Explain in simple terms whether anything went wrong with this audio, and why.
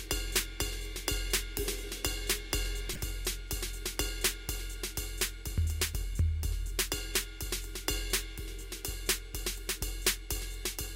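A corrupt frame decoded at 2.91 to 2.98 s: damaged compressed data across a few frames was played anyway, putting a brief chirp, squeak, blip or burst of noise into the music.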